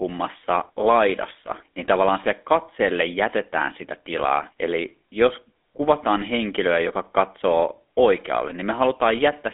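Throughout the speech, GSM full-rate codec damage gives a buzzy, gravelly roughness fitting 13 kbps pulse-excited coding; the spectrogram shows a 250 Hz to 3.5 kHz band, empty above.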